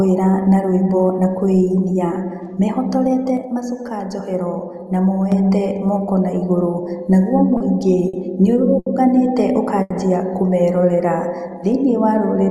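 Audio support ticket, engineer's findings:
Sudden gain jump, 3.37 s to 5.32 s. Speech and background noise drop together by about 6 dB in one step, then return just as abruptly. No ramp at either edge. Likely cause: a gain setting or bit shift applied sample-to-sample, unsmoothed.

Short stall from a late packet, four events: 7.57 s (30 ms), 8.08 s (50 ms), 8.79 s (70 ms), 9.82 s (80 ms). Each time the sound holds too long, then resumes from the same point with nothing missing. The jitter buffer ran empty and the receiver stretched the last audio until the packet arrived. Playout delay increases with each stall.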